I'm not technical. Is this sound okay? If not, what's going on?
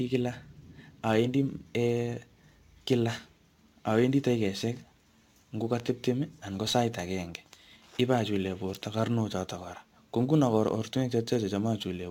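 No. Crude rate conversion runs throughout: the speech was converted from 44.1 kHz to 48 kHz by repeating samples without filtering, adding a gritty fizz.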